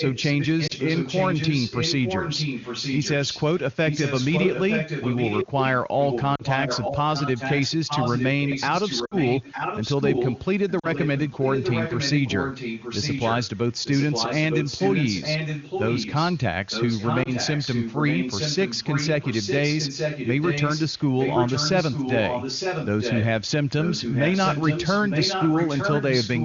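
From 0.0 s the sound carries an echo leak, a second copy trailing by 0.91 s at about 5 dB below the original. It persists through 0.0 to 5.47 s, 6.0 to 10.45 s, 10.69 to 16.38 s, 16.69 to 23.26 s and 23.82 s to the end. The likely cause is a far-end loudspeaker whose echo canceller let the microphone pickup return. The fixed, distinct delay separates it from room reverberation.

Lost AMR speech frames occur at 0.67 to 0.73 s, 6.35 to 6.42 s, 9.05 to 9.15 s, 10.79 to 10.87 s and 17.23 to 17.29 s. The decoder stretches the last good sound with falling gain, giving a brief dip or warble where a single frame is lost and a drop to near silence within two frames in the longer runs, rather than clicks. The longest, near 9.1 s, fits roughly three 20 ms frames.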